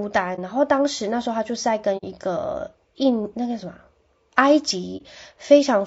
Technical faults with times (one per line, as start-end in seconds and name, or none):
0.00-5.87 low-delay AAC compression
0.35-0.39 AAC frame loss with muting
1.97-2.04 AAC frame loss with muting
4.97-5.02 AAC frame loss with muting